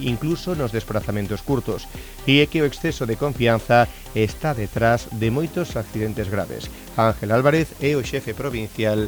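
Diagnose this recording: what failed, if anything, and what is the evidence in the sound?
The failure is low bit depth with dither at the sample-format conversion stage. A constant, even hiss runs through the whole clip, sitting about 25 dB below the signal, with no grainy distortion. Dither added before rounding to 7 bits turned the quantisation error into steady white noise.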